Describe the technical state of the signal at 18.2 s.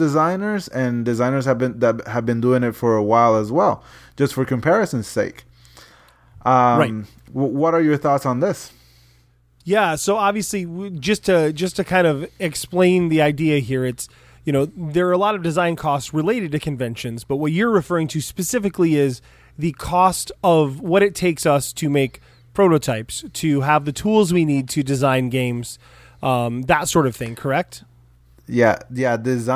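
At 18.2 s the speech signal is intact, with no audible fault at that moment.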